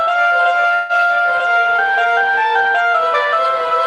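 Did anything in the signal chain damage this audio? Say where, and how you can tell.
Yes. From 0.74 to 1.01 s the sound stalls: the last fragment is held and smeared into a fading buzz, then the audio picks up exactly where it stopped, with nothing skipped. This is a call audio freeze at the network stage, likely caused by packets arriving late and the receiver's jitter buffer running dry. The receiver filled about 150 ms by extending the last sound, so everything after the freeze plays roughly 150 ms later than it would have.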